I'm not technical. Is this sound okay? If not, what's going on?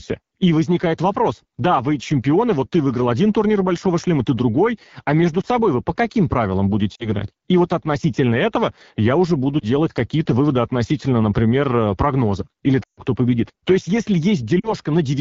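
No. The whole recording passes through the AMR wideband (HD Voice) codec at one of its lowest settings. That squeezes the speech hard. The result sounds rough and raspy throughout. This is the phone-call compression itself, not the microphone.

There are also lost AMR speech frames. Small chunks of the signal arrived garbled by radio errors, and the phone guessed to fill the gaps. Brief dips or warbles come at 5.41 to 5.46, 6.95 to 7.08, 9.59 to 9.64 and 14.60 to 14.74 seconds. The longest gap, 12.83 to 13.00 seconds, drops the sound to near silence before it recovers, rough at first.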